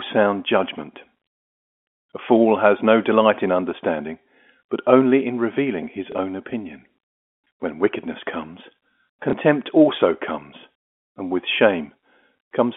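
At 6.12 to 6.15 s and again at 9.30 to 9.33 s the speech gives a small blip, a 30 ms repeat. This is packet loss with last packet repeated: the gap fits a single lost 30 ms packet, and the receiver replayed the previous one to fill it. Both fall within the narrow telephone band of the G.711 line.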